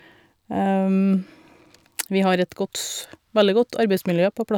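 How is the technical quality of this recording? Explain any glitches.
No technical faults can be heard anywhere in the recording; the speech signal stays continuous and intact throughout.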